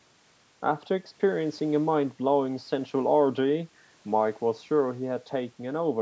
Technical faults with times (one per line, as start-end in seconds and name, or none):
none